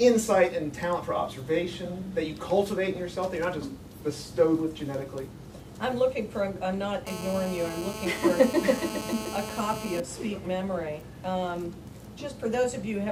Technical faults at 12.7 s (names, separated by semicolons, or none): none